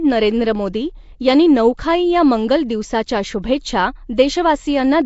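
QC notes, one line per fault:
Throughout: Nellymoser compression. The speech carries a rough, hissy halo and a smeared, underwater quality that stays plainly audible for the whole clip, and nothing is left above 7.7 kHz. This is likely the Flash-era Nellymoser Asao codec at a setting that fits 32 kbps. It codes short blocks with a fixed, thin bit budget, so weaker bands are given no bits and refilled with noise, which produces the hiss and blurred texture.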